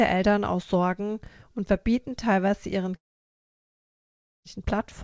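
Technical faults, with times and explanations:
2.96 to 4.47 s, long network dropout: right after "und verbieten teilweise ihren" the audio stops being delivered for about 1.5 s, likely because packets on the call path stopped arriving. The receiver briefly stretches the last sound into a fading buzz or hiss, then holds near-silence for almost the whole gap. Speech resumes at 4.47 s with the missing stretch simply gone. The G.722 path, which carries nothing above 8 kHz, limits the concealment tail to that band as well.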